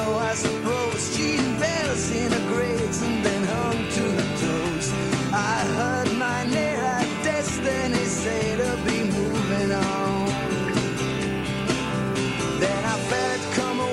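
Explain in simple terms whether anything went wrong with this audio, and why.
Nothing went wrong here.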